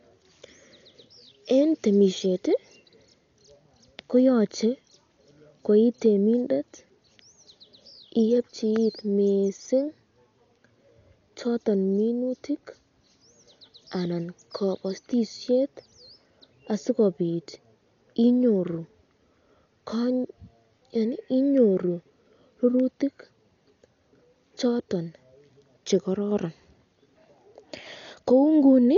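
From start to end, the speech is dull and band-limited, with nothing above 7 kHz. A rough, fluttering noise clings to voiced sounds. This is likely Dolby Digital compression at a low rate, fitting about 48 kbps. Starved frequency lines get filled with dither noise.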